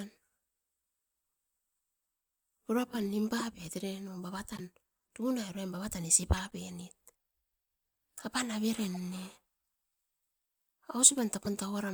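Damaged compressed frames were decoded anyway (corrupt frame decoded), misplacing energy in frequency as brief chirpy bursts: after "pura pam nim" at 3.38–3.42 s, at 4.52–4.60 s, after "uruan bava tan isi" at 6.37–6.53 s (longest, several frames), 8.94–8.98 s (faintest, about −40 dBFS) and 11.45–11.54 s.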